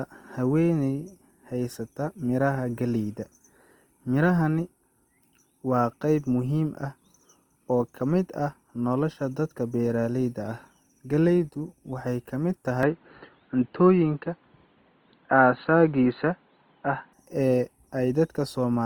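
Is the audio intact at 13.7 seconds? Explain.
No. At 13.7 s the recording sits inside a stretch from 12.83 to 17.13 s where the input was likely switched to a poorer device. The band abruptly stops near 4.4 kHz, so the sound turns dull and boxy. The level shifts by a few decibels, and a faint new noise floor appears well below the signal. The change happens with no gap at the switch.

Over this, as across the whole clip, the sound is grainy and rough, with tones smeared into noise. This points to likely Opus compression in its music (CELT) mode at a rate around 24 kbps. The encoder holds each band's energy but fills starved bands with folded or noisy content.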